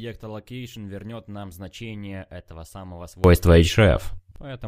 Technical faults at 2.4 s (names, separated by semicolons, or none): none